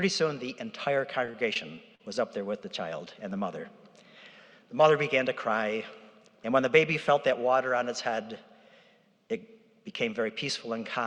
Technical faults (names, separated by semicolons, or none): repeated packet loss (robotic sound)